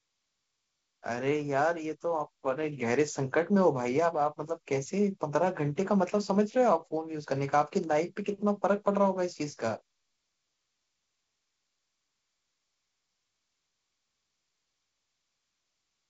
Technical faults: none

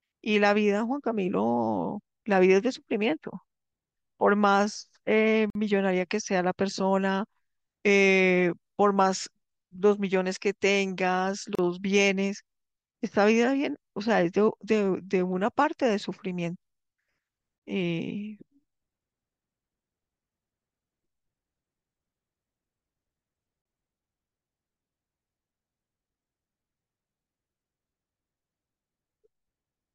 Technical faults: gap at a join of encoded pieces

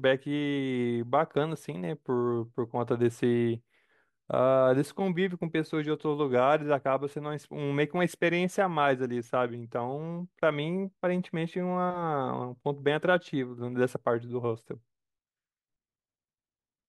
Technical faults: sample clock jitter

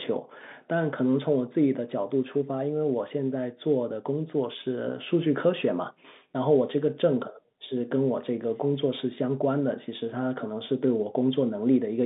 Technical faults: none

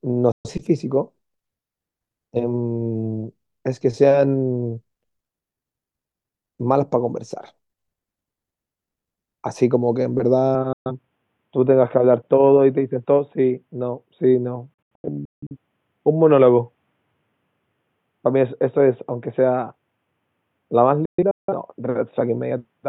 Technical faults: digital broadcast dropout; input switched to a poorer device

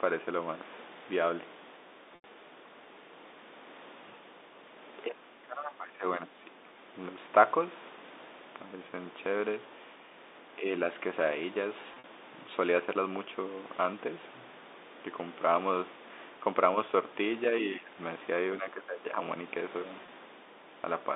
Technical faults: packet loss with pitch repetition; speech suppressed in double talk

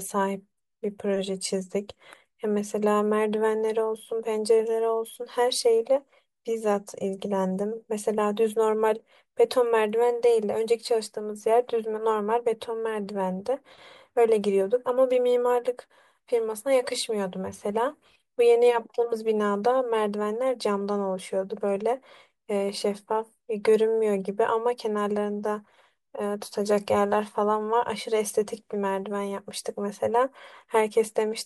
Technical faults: none

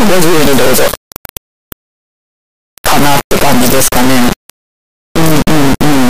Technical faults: integer read as float

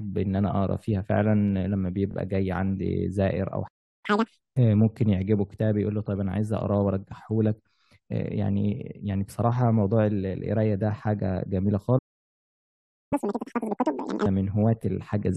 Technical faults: repeated frames; playback stall; catch-up at higher speed

